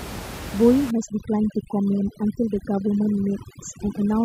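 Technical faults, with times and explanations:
0.91 to 4.24 s, overdone noise removal: bands near the estimated room noise are cut hard, so the background drops and breaks up into twinkling specks.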